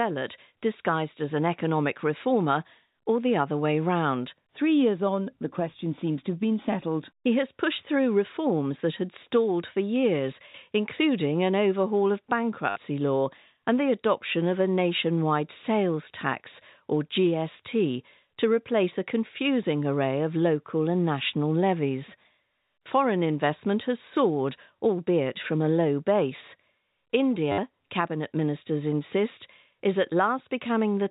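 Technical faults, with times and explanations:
12.70–12.76 s and 27.52–27.58 s, packet loss with last packet repeated: each 60 ms gap is patched by looping the last packet, so you get a robotic buzz near 100 Hz, which fits 10 ms packets. The first sits between "including an overhaul of" and "law and the adoption", the second just before "cabinet ministers insist is".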